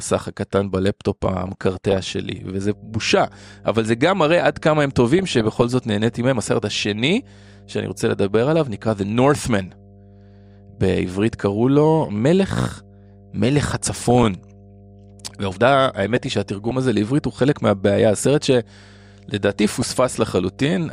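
Across the whole speech clip the sound is dull, with a gurgling, granular texture, likely from MP2 compression at a low rate, around 80 kbps. With too few bits, upper sub-bands switch off and flicker back, and the remaining bands are coarsely quantised.

DAB burbling appears at 1.31–1.97 s, 5.19–5.74 s, 8.82–8.88 s, 13.67–14.26 s, 16.16–16.71 s and 19.62–19.94 s. Weak reception lets residual bit errors, well under one percent, corrupt scale factors and samples, so single sub-bands jump for a frame, giving muddy bubbling, chirps and squelches.

From 2.13 s to the end, mains hum sits under the speech as a steady 50 Hz tone with low harmonics, about 25 dB below the signal. This points to a ground loop or nearby transformer coupling the power line into the audio path.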